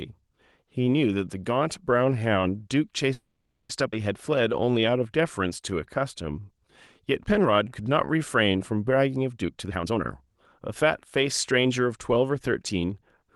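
From 3.13 to 3.71 s there is a call audio freeze. The last sound carries on as a fading buzz, then about 0.44 s of silence, and speech resumes with nothing lost. This was likely caused by packets held up in transit while the jitter buffer ran dry.

At 3.91 to 3.94 s the playback skips ahead. Around 0.4 s of speech is dropped and the two sides are spliced almost directly, so the jump is abrupt.

A jitter buffer slow-down runs from 4.31 to 8.53 s. Repeated pitch periods stretch the speech to 92% speed, adding 346 ms without changing the pitch.

Two jitter buffer speed-ups follow, where short pitch-period cuts shorten the audio to shrink a surplus buffer. From 9.42 to 10.87 s, speech runs at 131% and sounds rushed, with roughly half a second removed. From 11.58 to 12.89 s, a milder 107% trims roughly 0.1 s.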